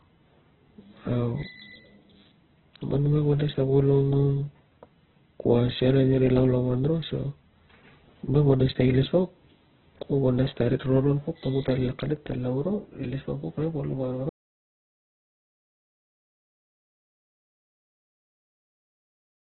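Throughout the speech, heavy Opus compression is likely the cause of rough, grainy, muffled sound with nothing above 4.2 kHz. The narrowband sound points to a very low rate near 8 kbps, here in the music mode. A spectrogram shows a flat ceiling at 4.2 kHz and noisy bands below it.

From 14.29 s to the end, the audio drops out to silence, likely because the input was lost while recording continued. The sound stops abruptly with no room tone at all. On the waveform it is a flat line, and on the spectrogram it is a blank field.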